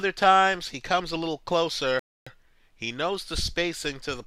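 At about 1.99 s the sound drops out to silence and picks up again at 2.27 s. That's a rebuffering stall: the player ran through everything it had downloaded, had nothing left to play, and just waited for more data to arrive. When playback comes back, it continues from exactly the point where it stopped, so nothing is missing. You simply get roughly 272 ms of dead air inserted into the timeline.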